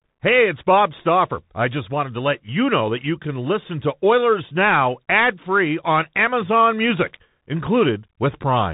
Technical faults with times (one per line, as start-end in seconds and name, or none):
0.00-8.73 Bluetooth CVSD headset codec